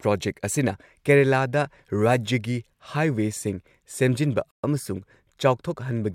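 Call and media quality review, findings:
Bluetooth stall, 4.51–4.63 s: speech drops to silence for about 128 ms, then resumes. Likely radio interference delaying packets; headphone buffer ran dry, playback paused until retransmissions arrived.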